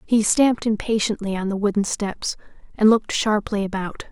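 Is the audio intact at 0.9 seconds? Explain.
Yes, the speech at 0.9 seconds is intact, with no fault to be heard at that moment.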